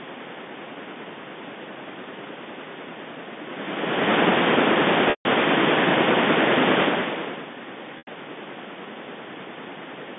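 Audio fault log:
5.10–5.25 s and 7.98–8.07 s, packet loss with pitch repetition. Gaps of 150 ms and 90 ms were bridged by repeating the last pitch period. Each gap starts as a brief buzzy hold, then fades to silence within about 50 ms. The speech returns with a short cross-fade.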